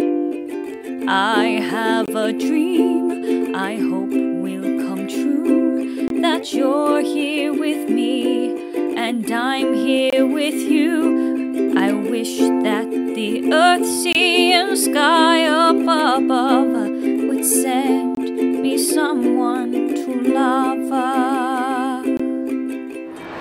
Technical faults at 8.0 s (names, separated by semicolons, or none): none